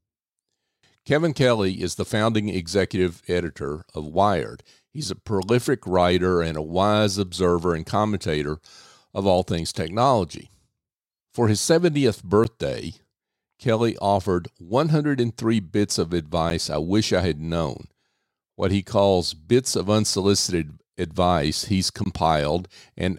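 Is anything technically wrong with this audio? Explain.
Yes. There are three blocks of digital silence in this speech, at 12.44 s, at 16.5 s between "bits of" and "I wish I had", and from 22.04 to 22.06 s after "of unsolicited advice he's." In each, the output briefly drops to zeros, likely because a buffer wasn't filled in time. The abrupt cuts produce a tick or tiny hole of 10 to 20 ms.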